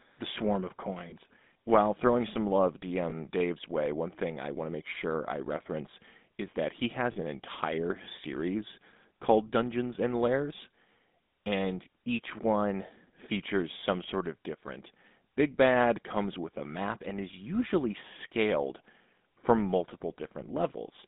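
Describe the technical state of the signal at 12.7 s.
At 12.7 s the speech is passing through a GSM full-rate codec, which applies across the whole clip. The codec models the vocal tract and excites it with a sparse, regular pulse train, and runs at 13 kbps. The line band runs only from 200 Hz to 3.7 kHz, and the speech has a plainly audible buzzy, gravelly roughness.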